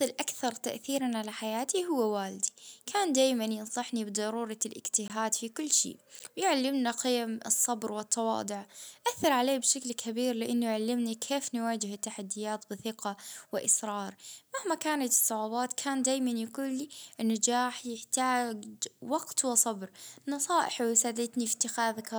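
Twice the output likely stopped being filled in time and blocks of samples went to zero: about 20 ms at 5.08 s and 10 ms at 6.19 s. Each block of digital silence cuts the speech off and back with no fade, the first heard as a short hole and the second as a tick.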